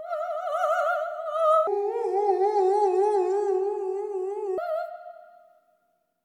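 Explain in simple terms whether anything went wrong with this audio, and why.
Between 1.67 and 4.58 seconds, a section at the wrong speed appears. The likely cause is that an editor or player handled that stretch against the wrong clock, running it at about 0.6 times its proper speed. Because speed and pitch are tied together, the sound both slows down and drops by roughly ten semitones, close to an octave. It turns deep and dragging, then snaps back to normal pace and pitch when the section ends.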